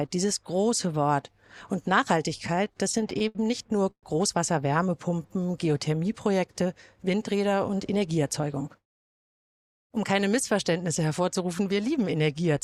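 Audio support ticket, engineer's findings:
Repeated stalls (stutter), 2.38 to 3.37 s: ten short hitches, longest 69 ms, 157 ms padded in total. Jitter buffer kept running dry on late packets; nothing actually dropped.

Call audio freeze, 3.91 to 4.05 s: sound hangs about 120 ms, fading to 80 ms of silence, then picks up where it left off. Likely held-up packets emptying the jitter buffer; delay grew 119 ms.

Jitter buffer slow-down, 5.09 to 5.60 s: playback at 88% speed, pitch unchanged, 69 ms stretched in. Receiver repeating pitch periods to rebuild its reserve.

Jitter buffer speed-up, 7.53 to 8.84 s: runs about 111% speed, same pitch, somewhat hurried feel. Buffer trimming around 150 ms of excess audio to pull delay back down.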